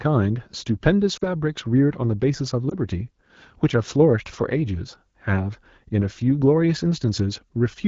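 The speech drops toward near silence from 1.17 to 1.24 s, and a shorter dip follows at 2.69 to 2.75 s. Both are lost AMR speech frames. The first gap fits about two missing 20 ms frames and the second fits one. The wideband decoder filled each gap by repeating the last good pitch and vocal tract settings at falling gain. The surrounding AMR-WB audio sounds clean, as at a mid rate.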